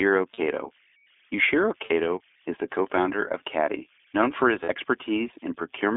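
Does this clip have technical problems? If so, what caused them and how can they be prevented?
Yes. The speech carries three kinds of fault.

Converter idle tones run through the whole clip: a faint whistle around 2 kHz, about 38 dB below the speech, audible in pauses and as a grainy layer under quiet passages. An undithered delta-sigma converter falls into repeating bit patterns at low input levels. On a spectrogram this shows as a thin horizontal line near 2 kHz. Adding dither to the converter, or using one with built-in dither, prevents it.

The iLBC codec also affects the whole clip. It sounds slightly rough and synthetic, with the damage plainly audible. The line band runs only from 300 Hz to 3.5 kHz, and the quality points to iLBC's 15.2 kbps mode with 20 ms frames, each frame's excitation coded on its own. On a spectrogram, energy stops sharply above 3.5 kHz and below 300 Hz. Using a wideband codec such as Opus for the call avoids this.

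Lost iLBC frames occur at 0.34 to 0.39 s, 1.86 to 1.92 s and 4.64 to 4.69 s. Each is a 40 ms gap, which fits two lost 20 ms frames. The decoder fills each gap by repeating the last pitch cycle mixed with noise, so it sounds like a brief held, buzzy vowel, and the speech recovers at once. On a spectrogram, each gap shows as a short stretch of repeated harmonics that smears into noise. A jitter buffer and forward error correction on the network path prevent these losses.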